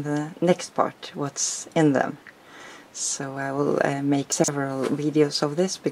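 At 2.60–2.68 s and again at 4.32–4.48 s, chunks out of order: a 40 ms block plays one, then three, chunks late, giving a jumbled moment and visible hard seams in the waveform.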